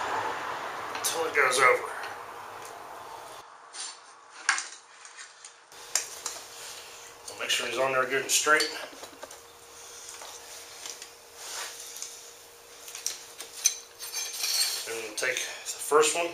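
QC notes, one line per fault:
3.41–5.72 s, input switched to a poorer device: the sound turns duller, a few dB quieter, with nothing above 9.8 kHz and faint added noise; likely a narrower-band microphone.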